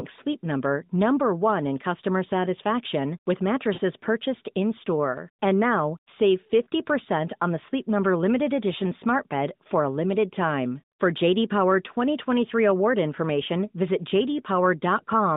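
At 3.74 to 3.80 s there are lost AMR speech frames. The gap lasts about 40 ms, which fits two dropped 20 ms frames. The narrowband decoder fills it by repeating its last good pitch and vocal tract settings at falling gain, heard as a brief stretched warble and level dip.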